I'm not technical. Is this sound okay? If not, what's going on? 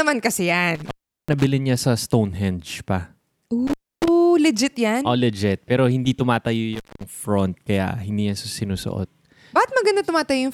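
No. The speech has an intermittent contact fault three times: at 0.75 to 1.45 s, just before "niya sa"; at 3.67 to 4.08 s, before "legit yan"; and at 6.73 to 7.04 s, before "front kaya hindi niya". A loose cable or plug briefly loses its connection, so the sound drops out for about 0.38, 0.29 and 0.21 s, with a crackle as the contact breaks and reconnects and only faint hiss in between.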